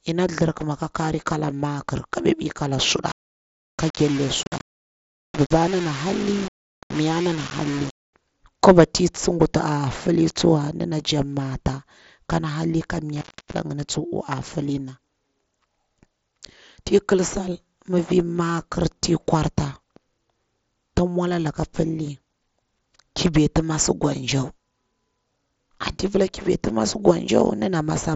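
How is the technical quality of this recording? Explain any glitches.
Two clear glitches, heard over a wideband Bluetooth headset path whose light mSBC graininess sits on loud sounds.

From 3.08 to 8.13 s the speech turns gritty and grainy, with noise only roughly 15 dB down, most likely low bit depth without dither, sounding like about 5 bits of rounding.

From 13.16 to 13.60 s, right after "kon halli ka", an intermittent contact drops the line for about 0.33 s, with crackle at each edge.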